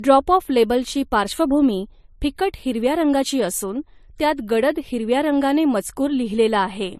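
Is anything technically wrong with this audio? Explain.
Yes. Throughout the speech, nothing is present above 14 kHz. This points to transcoding between lossy codecs, likely an AAC-LC encode at a low rate, around 48 kbit/s, later re-encoded to MP3 at a similarly low rate. The MP3 stage wasted bits reproducing the earlier AAC artefacts and added its own, so both kinds of damage are heard layered together.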